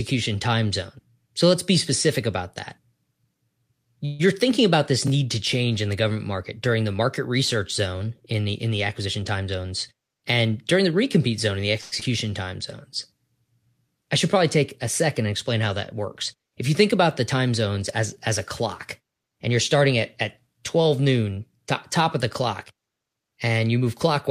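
Speech recording with several network playout faults. At 4.05–4.34 s and again at 11.81–11.94 s the sound stalls into a fading continuation of the preceding audio for about 140 ms and 110 ms, then resumes intact. This is a call audio freeze, likely caused by delayed packets emptying the jitter buffer. A jitter buffer speed-up runs from 9.05 to 10.26 s at 111% speed, trimming roughly 150 ms by removing pitch periods, so delivery sounds hurried at unchanged pitch. A second speed-up follows "as as a clock" at 18.99–20.55 s, at 107% speed, with roughly 100 ms removed. Right after "recompete zone in the", a skip ahead at 12.00–12.03 s drops roughly 70 ms, and playback jumps forward almost seamlessly. Immediately after, a jitter buffer slow-down from 12.26 to 12.90 s plays at 94% speed, repeating pitch periods to add 45 ms of buffer reserve and drawing the sound out slightly.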